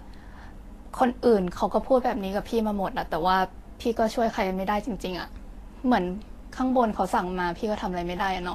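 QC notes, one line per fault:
Throughout, Vorbis compression: the speech has likely passed through a low-bitrate Vorbis encode, with damage that is plainly audible and a density that fits something around 36 kbps. The encoder has discarded everything above 14.2 kHz and quantised the remaining treble so coarsely that fine detail has turned into noise of similar energy. The speech comes out hissy and grainy, voiced tones sound roughened, and consonant onsets lose their sharpness and blur.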